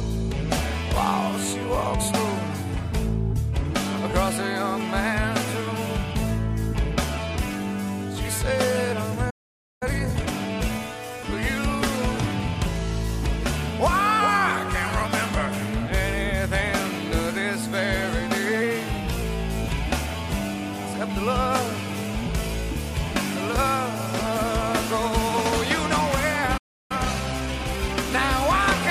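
Playback stalls at 9.30 s and 26.57 s cut the audio off mid-flow for about 0.51 s and 0.32 s, likely because the player ran out of buffered data or its output thread was blocked, so nothing reached the output until it recovered. Time-compressed catch-up follows each stall. From 9.83 to 10.33 s the audio runs at 2× speed, and from 26.92 to 28.20 s at 1.25×, both at normal pitch. Small slices are dropped and cross-faded to shrink the backlog, which gives a hurried quality. Drift correction steps at 14.20–15.05 s and 18.62–19.22 s change speed and pitch together. The first slows the audio by 5.83% and drops the pitch by about 104 cents. The second speeds it up by 5.83% and raises it by about 98 cents. Each is a sudden detuning of roughly a semitone that then snaps back, likely from clock-matching software abruptly changing the playback rate to refill or drain its buffer.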